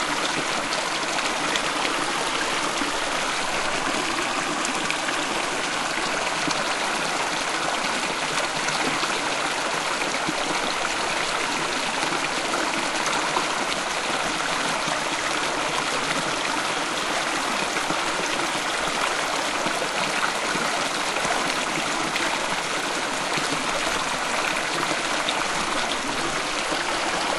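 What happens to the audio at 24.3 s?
At 24.3 s the resampler is restarted on every block, from 16.9 to 24.9 s. Each 20 ms block's edges are interpolated without true neighbours, giving a 50 Hz buzz.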